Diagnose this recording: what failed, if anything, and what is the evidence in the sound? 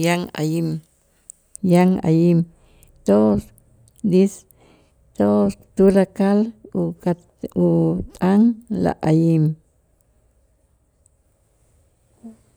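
De-emphasis applied wrongly from 1.58 s to the end: a processing-stage treble cut dulls the speech, dropping 10 kHz about 11 dB below 1 kHz with no matching pre-emphasis.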